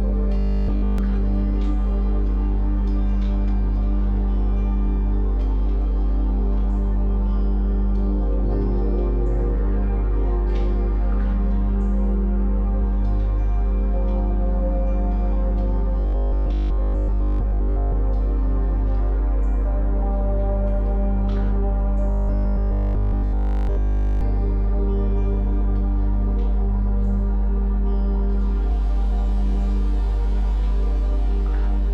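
Robotic sound from repeated short buffers appears at 0.38–0.98 s, 16.00–17.94 s and 22.11–24.21 s: a rigid metallic buzz at 50 Hz, nearly total in the first and last spans, partial in the second, likely from a 20 ms segment looping while incoming audio was late.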